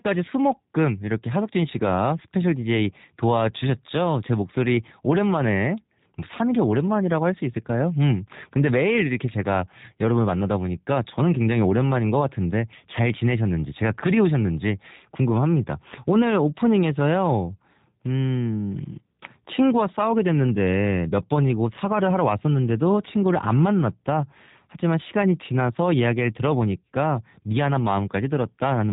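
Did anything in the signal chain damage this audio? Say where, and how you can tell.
Yes: G.729 codec damage throughout, at the codec stage. Nothing passes above 3.8 kHz, and the rough, synthetic speech comes from pulse-and-filter rebuilding, which points to an 8 kbit/s coder.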